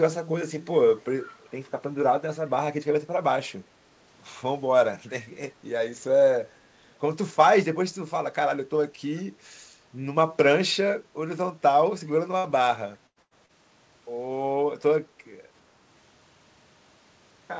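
Echo leak at 1.2 to 1.51 s and again at 12.07 to 12.11 s: a delayed copy of the speech returns 403 ms late, faint at roughly 25 dB below the speech, then fainter still at roughly 35 dB. Likely the far end's loudspeaker output reached its microphone and its echo canceller let some through.

Burst of packet loss at 12.38 to 12.47 s, 13.07 to 13.19 s and 13.22 to 13.34 s: runs of audio lasting about 60, 90 and 90 ms never arrived in time. The receiver stretched the last sound for 59, 93 and 87 ms, fading it into a held buzz or hiss, then jumped ahead with those stretches gone.

Short concealed packet loss at 13.46 to 13.52 s: 30 ms went missing, and the receiver filled it by continuing the preceding sound before blending back. It comes through as a brief smear, heard against the band-limited wideband call sound, which has nothing above 8 kHz.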